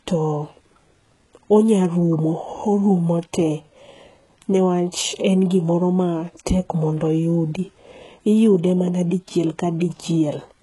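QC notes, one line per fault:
throughout: HE-AAC compression, likely. Heavy codec damage: the top band sounds synthetic, and sibilants come out gritty and lispy. This fits a very low bitrate near 12 kbps, where the treble is rebuilt from copied lower bands rather than coded, so its harmonics misalign.
9.80 s: pre-echo. A brief hiss of about 15 ms smears in just ahead of a sharp onset and softens its attack. The transient landed late in a transform block, so quantisation noise sized for the loud portion spread back into the quiet moment before it.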